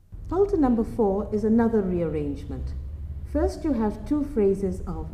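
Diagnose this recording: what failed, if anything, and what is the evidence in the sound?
Nothing failed; no audible fault at any stage.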